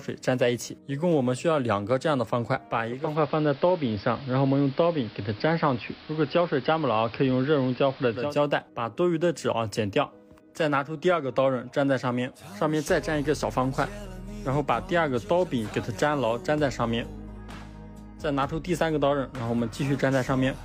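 From 2.88 s to 8.41 s the sound turns dull and hissy: the treble drops, a steady hiss sits roughly 25 dB below the signal, and the level shifts by about 1 dB. Each change-over is a smooth 350 ms cross-fade rather than a cut. This is digital radio blending to analogue: the hybrid receiver lost the digital stream, faded across to the station's AM broadcast, and then returned to digital.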